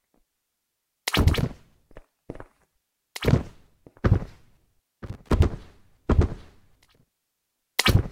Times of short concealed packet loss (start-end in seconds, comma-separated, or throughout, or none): none